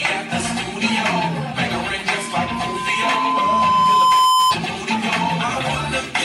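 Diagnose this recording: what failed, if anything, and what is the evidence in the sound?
Loudspeaker feedback squeal in the analogue acoustic path. A steady 1 kHz tone appears at 2.09 s, swells over roughly two seconds to around 10 dB above the sound, then stops at 4.56 s. The microphone was picking up its own loudspeaker, and loop gain exceeded unity at 1 kHz.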